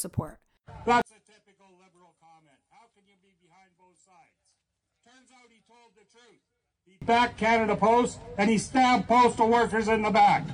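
One channel inverted, from 1.02 to 7.02 s: the sound nearly disappears, falling by about 37 dB. The likely cause is reversed polarity on one stereo channel, so whatever the two channels share cancels when they are summed to mono, leaving only their difference.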